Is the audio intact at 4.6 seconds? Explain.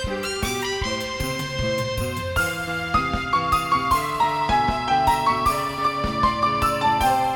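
No, there's a feedback whistle there. From 4.17 s to the end, a thin, steady tone around 4.8 kHz sits roughly 25 dB under the sound, swelling and fading slowly in level. It's likely a speaker-to-mic loop hovering right at the edge of feedback.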